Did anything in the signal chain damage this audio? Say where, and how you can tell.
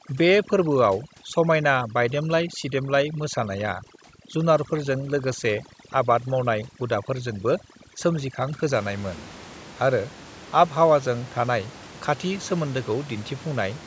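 Yes. From 0.00 to 8.73 s the background collapses into near silence dotted with twinkling specks. That is overdone noise removal in the call processing: the suppressor cuts any band close to its noise estimate, taking the room noise and quiet speech detail with it.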